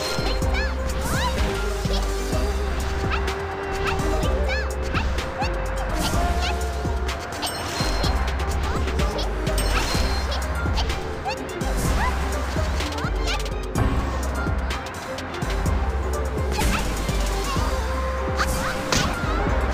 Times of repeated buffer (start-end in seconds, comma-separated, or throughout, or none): 1.37, 6.03